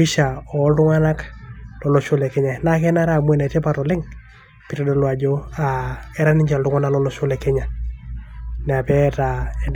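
Nothing technically wrong turns up in this short bit of speech, so there's no fault to point to and no time worth marking.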